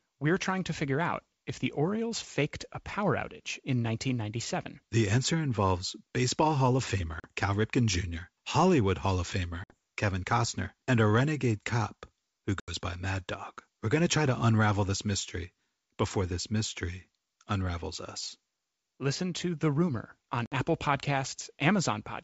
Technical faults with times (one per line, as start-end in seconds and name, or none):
7.20-7.27 packet loss on an ADPCM call
9.64-9.74 packet loss on an ADPCM call
12.60-12.73 packet loss on an ADPCM call
20.46-20.56 packet loss on an ADPCM call